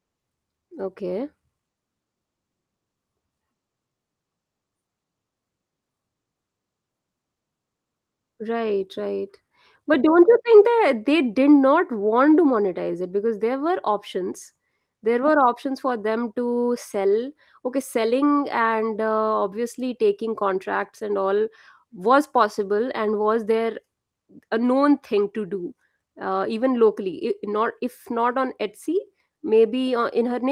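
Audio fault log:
No faults are audible anywhere in this speech recording.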